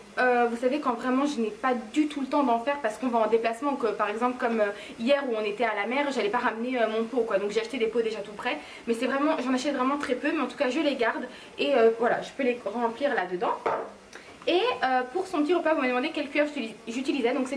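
No technical faults can be heard anywhere in the audio.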